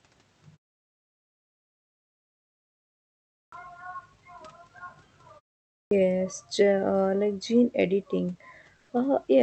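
A speech recording with clipped starts after a pause at 3.41 s and 5.80 s, where roughly the first 110 ms of sound is swallowed as the output device wakes from silence, so each onset begins abruptly. At 8.77 s, just after "like gene editing", the room background gives way for about 120 ms to a steady, featureless noise about 1 dB quieter, likely comfort noise in place of the background generated during discontinuous transmission in the Opus call codec.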